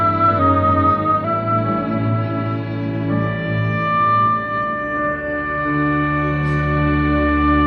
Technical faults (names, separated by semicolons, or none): drift correction step